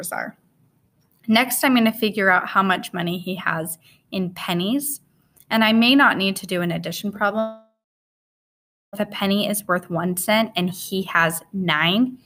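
From 7.39 s to 9.03 s the sound smears into a fading buzz, then drops to about 1.2 s of silence before resuming with roughly 1.5 s of material gone. This is likely a long network dropout, with the receiver concealing the gap.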